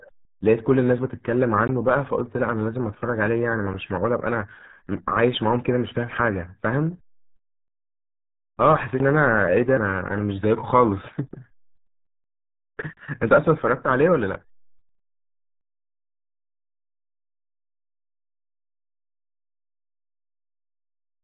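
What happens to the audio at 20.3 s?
At 20.3 s the speech carries RealAudio 14.4 codec damage, present throughout. Nothing passes above 3.8 kHz. The muffled, gargly sound fits an 8 kbit/s dial-up codec.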